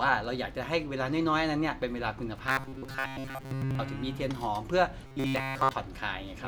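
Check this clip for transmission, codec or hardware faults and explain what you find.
The speech has one kind of fault, robotic sound from repeated short buffers, at 2.47 to 3.79 s and again at 5.07 to 5.73 s. Both stretches turn into a rigid metallic buzz fixed at 134 Hz, which fits a loop of roughly 7.5 ms. Fresh audio likely arrived too seldom, so that sliver kept repeating while most of the real signal was skipped. Unlike codec warbling, the buzz stays locked at one pitch and follows the talker's speech only roughly.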